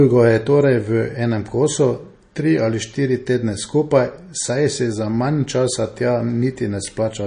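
Throughout the speech, there is plainly audible codec damage, likely from MP3 compression. Nothing is heard above 9.8 kHz. That fits a low bitrate around 32 kbps. With too few bits, weak frequency lines drop in and out between frames. Detail smears.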